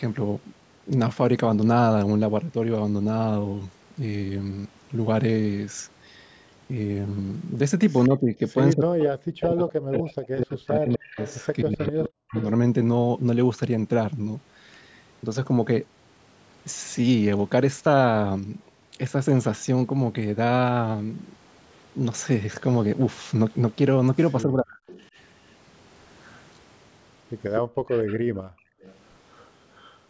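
At 8.04 to 8.09 s a brief echo leak appears: a faint copy of the speech returns 250 ms late, roughly 20 dB down. A loudspeaker's echo canceller likely let it through.

From 8.08 to 12.36 s the speech is suppressed in double talk. It dips and breaks up for about three seconds in total, sometimes by as much as 40 dB. The canceller likely mistook the talker for echo while both sides spoke.

From 9.03 to 12.45 s the echo leak is stronger, only about 10 dB below the speech. It stays 250 ms behind.

The same double-talk suppression returns at 24.45 to 24.81 s, cutting the speech for under half a second. A faint echo follows at 24.87 to 25.06 s, about 25 dB down.

From 27.55 to 29.98 s a 250 ms echo sits about 20 dB below the speech. Within it, from 27.61 to 28.83 s, the background is gated by the echo canceller. The room sound drops by about 40 dB for around a second, then comes back. Throughout, nothing above 8 kHz is heard, as expected from call processing.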